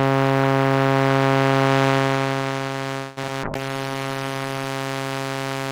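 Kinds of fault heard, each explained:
Repeated packet loss (robotic sound): Between 2.97 and 3.57 s, four gaps break up the audio. The receiver bridges most of the missing audio by stretching the last received sound, about 227 ms in total, and leaves about 60 ms as silence. The longest gap is 192 ms, and close to half the stretch is concealed, so it sounds choppy. Unlike a bitrate drop, the texture here is broken by holes and smeared repeats, not uniformly degraded.
Call bitrate drop: From 3.43 to 4.74 s, the encoder's budget falls from 96 kbps to 15 kbps and stays at the bottom for about 1.2 s. It starts shortly before the packet-loss stretch ends. At that rate the codec quantises coarsely and trims the upper frequencies, so the sound turns rough, watery or muffled. A fader change alters loudness, and packet loss leaves holes, but this keeps running continuously with a thinned, grainy tone.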